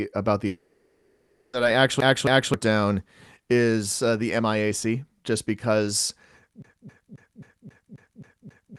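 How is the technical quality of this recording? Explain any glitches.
The recording has clear glitches: one long gap near the start and two stretches of rapid repetition, all heard through a call codec that limits the top end to about 12 kHz.

Long network dropout, 0.47 to 1.55 s: for about 1.06 s, the speech is replaced by a synthetic continuation of the last sound, a buzz or hiss with no silent stretch, before normal speech resumes with the missing portion gone. The likely cause is a lengthy interruption in arriving audio, papered over by the receiver's loss concealment.

CD stuck on one turn, 2.00 to 2.54 s and 6.62 s to the end: a 0.27 s fragment jumps back and replays, twice in the first case and nine times in the second, with a brief mute at each jump. It's the even, machine-like stutter of a skipping disc.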